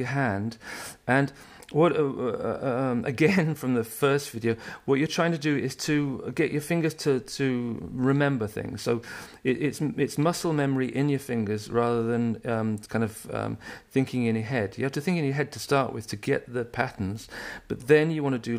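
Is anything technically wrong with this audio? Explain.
No, nothing in the audio points to a technical fault; the signal holds steady and continuous throughout with no disturbance in its level, timing or frequency content.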